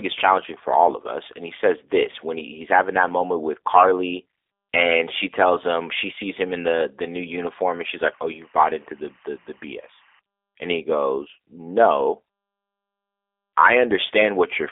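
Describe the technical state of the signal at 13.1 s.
The link is carrying the audio through the G.729 codec, which fits an 8 kbit/s coder rebuilding speech from a vocal tract model and sparse pulses. At 13.1 s, as throughout, the band is confined to roughly 300 Hz to 3.6 kHz, nothing passes above 3.7 kHz, and the speech sounds plainly rough and synthetic.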